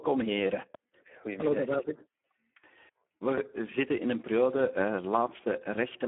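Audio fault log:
Throughout, Speex codec: the speech sounds hoarse, grainy and noisy, edging toward robotic, and is boxed into a narrow telephone-like band of roughly 200 Hz to 3.4 kHz with nothing above about 3.8 kHz. Speex is a CELP codec that models the voice with a predictive filter plus an excitation signal. At a low setting, which fits about 8 kbps, too few bits describe that excitation, so the voice's fine texture is replaced by coarse, noisy buzz.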